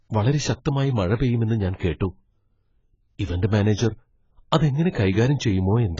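From start to end, the speech sounds dull and smeared, with a warbling, fizzy edge on sibilants. Nothing is heard above 7.6 kHz. The likely cause is heavy AAC compression, which fits a very low AAC-LC bitrate of around 16 kbps. The coder dropped the top band and starved the rest.

At 2.00 s, a brief pre-echo precedes a sharp attack: a short hiss, about 11 ms long. It returns at 4.92 to 4.95 s, spreading about 28 ms. Quantisation noise leaked into the quiet moment before each attack, softening it.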